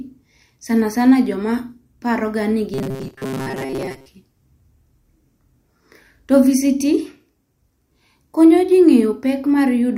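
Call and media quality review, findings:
Robotic sound from repeated short buffers, 2.74–4.06 s: rigid metallic 133 Hz buzz, most of the span repeated. Likely jitter-buffer underrun looping a roughly 7.5 ms block.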